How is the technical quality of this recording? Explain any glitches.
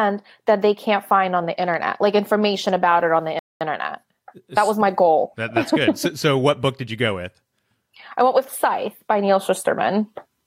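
The speech has one glitch, a dropout near the 3.4 second mark. At 3.39 s the sound cuts to silence. It stays silent for about 216 ms, until 3.61 s, then resumes. This is a Bluetooth stall. The likely cause is wireless interference delaying packets on the link. The headphones' buffer emptied before the resent packets arrived, so playback halted. It is a clean gap of dead air, not crackle or distortion.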